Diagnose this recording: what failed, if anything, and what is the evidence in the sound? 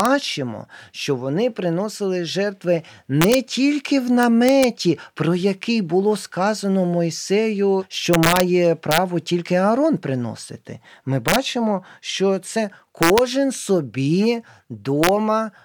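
Integer overflow in a gain or sample-format conversion stage: speech peaks about 0 to 2 dB over full scale wrap to the opposite sign instead of clipping. This gives violent cracks at 0.00, 3.22 s (after "що вони приносили жертви"), 4.23, 8.13, 8.91, 11.28, 13.03 and 15.04 s.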